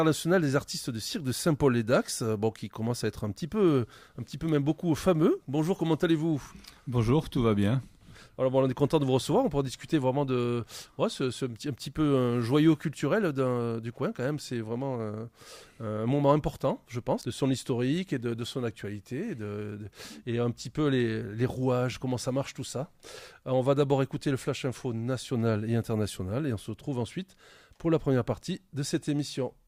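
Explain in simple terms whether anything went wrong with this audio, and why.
At 17.21 to 17.25 s the sound jumps ahead with a small blip. This is likely a stream segment skipped, leaving part of the programme missing.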